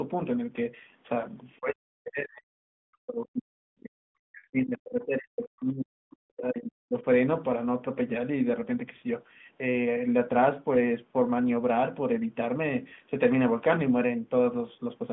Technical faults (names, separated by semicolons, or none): speech suppressed in double talk; lost AMR speech frames